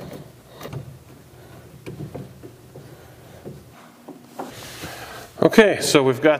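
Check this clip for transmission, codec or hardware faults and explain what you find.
One fault: a section at the wrong speed, from 3.73 to 4.50 s. The likely cause is an editor or player running that stretch against the wrong clock, reading samples at twice the intended rate. Because playback runs 2.0 times too fast, pitch rises with tempo instead of staying put: the sound abruptly turns hurried and shifts up by roughly ten semitones, then returns to its normal rate and pitch at 4.50 s.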